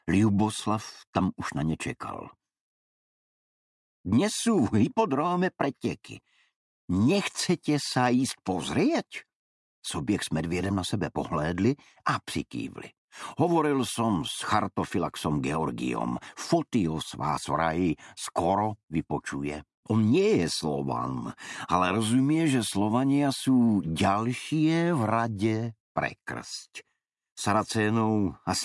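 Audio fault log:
No faults were found in this audio. Nothing heard in it calls for an entry in this log.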